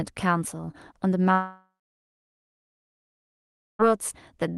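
At 1.33 s the speech breaks off and does not return until 3.82 s, a gap of about 2.5 s, most likely a long network dropout. The receiver first stretches the last sound into a short fading buzz, then about 2.1 s of silence follows. When the speech resumes through the Opus call path, whose band stops near 12 kHz, it picks up later in the stream, and the audio from that stretch is simply absent.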